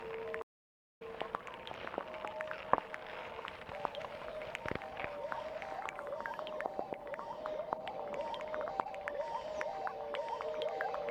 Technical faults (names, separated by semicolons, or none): stream reconnect